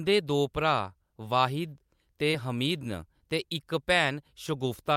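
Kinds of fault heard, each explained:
Short concealed packet loss: Right after "वाहिद ते", at about 2.31 to 2.35 s, roughly 20 ms of the speech never arrived in time, and the receiver bridged the gap by extending the preceding sound for about 13 ms before easing back into the real signal. The result is a brief smear rather than silence or a sharp click, which separates it from a plain dropout or a digital glitch.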